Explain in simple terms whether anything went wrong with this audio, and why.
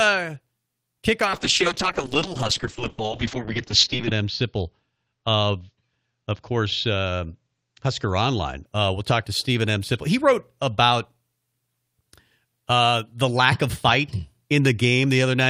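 A call bitrate drop runs from 1.27 s to 8.71 s. The connection seemed to slow, so the call software told its encoder to squeeze the speech into far less data. With so little room, it keeps only the rough outline of each sound and throws away the top end, here trimming everything above about 8 kHz. The voice turns muffled and watery, worst for nearly three seconds, before recovering.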